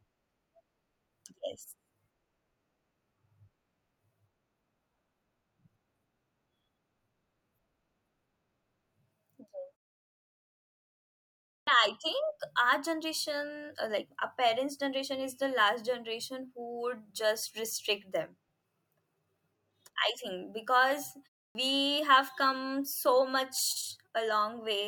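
Speech clip with a clipped start after a pause at 11.62 s, following a 1.9 s gap, and at 21.5 s, between "I think because" and "have come so". The output device wakes late, so about 50 ms of onset is lost. Waveform and spectrogram show a hard-edged start.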